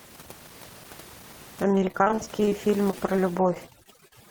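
From 1.62 s to the end, overdone noise removal takes hold. The suppressor is clamping frequency bands down whenever they sit close to its noise estimate, so the room noise, which was about 21 dB under the speech, collapses into near silence with little twinkling specks. The quieter parts of the voice get pulled down along with it.

Layered on top of that is repeated packet loss, the robotic kind, in three bursts. From 1.75 to 2.52 s it's heaviest: 17 separate gaps, the longest 36 ms, with about a third of that stretch patched by stretching out the previous sound. Then 2.91 to 3.19 s brings four short holes of up to 11 ms, and 3.55 to 4.12 s has nine more, the longest 40 ms. Each hole is filled by extending whatever came just before it, and the gaps follow each other so quickly that the speech goes choppy, with bits of it missing.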